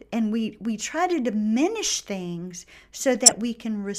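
At 1.11 s, between "and we we try" and "diminish things", a corrupt frame decoded gives a short, fairly quiet chirp. At 3.26 to 3.34 s, after "diminish things", a longer, near-full-scale burst suggests about four damaged frames in a row. In each case the decoder played flipped bits as wrong gains and spectral codes, putting energy at frequencies the speech never had. Unlike a dropout or a single-sample click, this is a tonal or noisy blip lasting about one codec frame per damaged frame.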